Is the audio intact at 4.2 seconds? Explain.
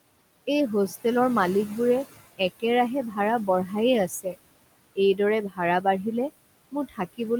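No. From 4.09 to 4.37 s the noise suppressor cuts speech. It mistakes quiet speech for noise and turns it down by up to about 16 dB. About a tenth of a second sounds swallowed and faint. Noise suppressor artifacts also run through this moment. The suppressor lowers the room noise by about 21 dB, so the noise sinks between the words and rises under them.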